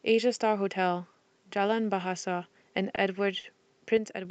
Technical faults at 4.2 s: one channel drops out

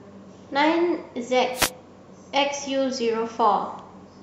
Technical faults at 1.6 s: wireless microphone noise hit

